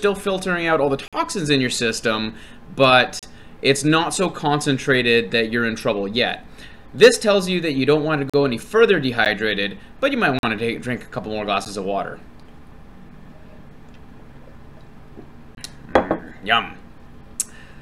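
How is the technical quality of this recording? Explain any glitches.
The recording is marred by repeated dropouts. Blocks of digital silence occur seven times: 1.08–1.13 s (46 ms), 3.19–3.23 s (35 ms), 8.30–8.34 s (41 ms), 9.25 s (12 ms), 10.39–10.43 s (43 ms), 11.65 s (12 ms) and 15.55–15.57 s (23 ms). Most likely the output buffer wasn't filled in time, so whole blocks went out as zeros; the gaps of 512, 1024 and 2048 samples fit such buffers. The sound cuts out and back abruptly: the shortest gaps are ticks, the longer ones audible holes.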